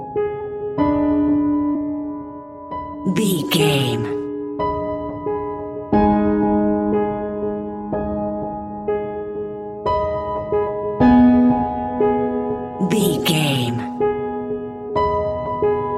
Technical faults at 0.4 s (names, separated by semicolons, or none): compressed frames skipped